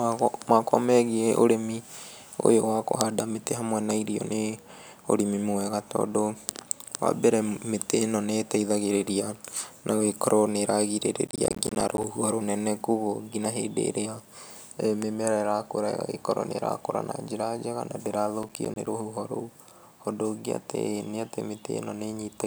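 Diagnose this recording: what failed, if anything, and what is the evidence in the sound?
Processor overload crackle at the driver or buffer stage, from 11.27 to 12.04 s and from 18.43 to 18.87 s, between "njega na" and "rũhuho rũu". Rapid hard-edged silent gaps suggest a roughly 10 ms buffer repeatedly missing its deadline. Unlike network loss, nothing is smoothed or concealed.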